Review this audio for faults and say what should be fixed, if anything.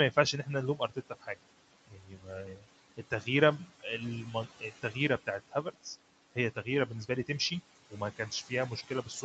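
Noise suppressor artifacts run through the whole clip. The suppressor pulls the steady room noise down by about 18 dB between phrases and lets it back up under the speech. Easing the suppression depth, or switching to a gentler mode, would keep that residue steadier.

Speech cut by the noise suppressor shows up in six stretches: 0.12–1.5 s, 1.87–3.27 s, 4.34–5.86 s, 6.35–7.29 s, 7.9–8.51 s and 8.88–9.23 s. Soft consonants and word tails get mistaken for noise and dropped by about 13 to 18 dB. The second stretch loses the most, well over half a second in total. Less aggressive suppression, or better mic placement so speech sits further above the room noise, would stop it from chewing into the quiet parts.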